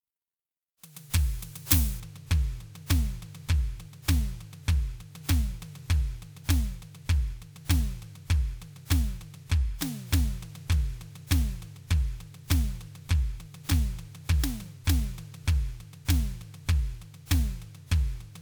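A music clip. From 0.0 to 2.0 s, pre-emphasis was left on. The treble boost applied before transmission was never undone. Highs stand about 11 dB above 1 kHz at 10 kHz, which fits a 50 µs FM curve. The sound turns thin, bright and hissy.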